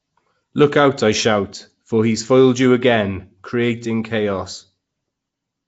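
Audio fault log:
Throughout: Nellymoser compression. The sound was likely coded with Nellymoser Asao, the old Flash microphone codec, at a rate that fits about 32 kbps. The codec works on short blocks with a fixed, small bit budget, so quieter bands get no bits and are filled with noise. The speech therefore carries a rough, hissy halo and a smeared, underwater character, and nothing is present above about 7.7 kHz.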